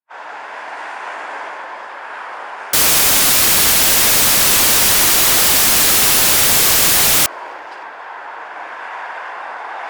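From 2.73 to 7.26 s the samples are built from the wrong bytes, so the low bits dominate and the sound turns to loud, harsh broadband noise.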